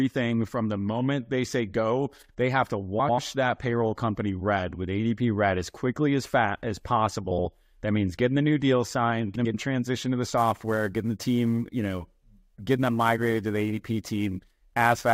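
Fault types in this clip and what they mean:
Frames out of order: Two neighbouring runs of frames got decoded in swapped order, so a short stretch plays back-to-front in halves. You hear a garbled flutter around 2.99–3.19 s, 7.31–7.45 s and 9.36–9.55 s, with blocks of about 70–93 ms.
Sample clock jitter: The converter's clock wobbles, somewhere around 10 µs, so samples land slightly early or late and steep parts of the waveform pick up error. From 10.38 s to the end, a roughness about 25 dB below the signal swells on louder, brighter sounds.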